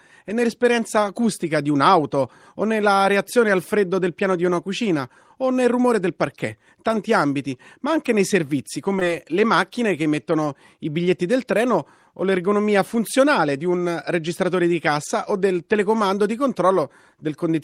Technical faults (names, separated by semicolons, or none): short concealed packet loss